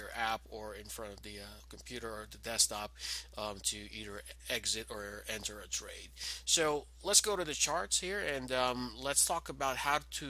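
No technical faults can be heard anywhere in the clip. There are no dropouts, glitches or other disturbances at any point in the audio.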